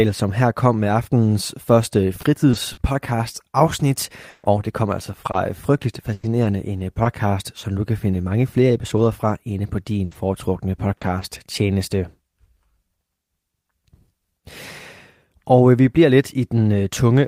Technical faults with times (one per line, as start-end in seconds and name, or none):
2.21-2.79 repeated packet loss (robotic sound)
4.29-7.07 repeated packet loss (robotic sound)
8.97-11.23 scattered short gaps